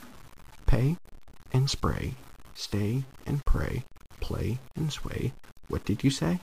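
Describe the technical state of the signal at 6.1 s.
Low bit depth without dither is present at 6.1 s, as it is across the whole clip. The speech carries a grainy, sputtering distortion that tracks its level, with the error sitting only about 25 dB below the signal. The cause is likely coarse quantisation with plain truncation and no dither, which fits roughly a 7-bit word. Because the error follows the waveform, quiet passages turn gritty and the faintest parts break up or collapse toward silence.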